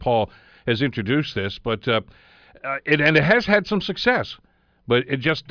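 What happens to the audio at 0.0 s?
Nothing goes wrong at 0.0 s; the speech starts cleanly, with no dropout, click or distortion at that point.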